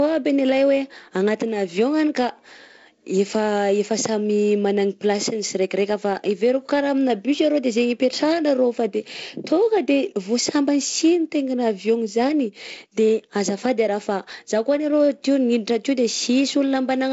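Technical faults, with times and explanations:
No technical faults can be heard in the speech, so there are no times or explanations to give.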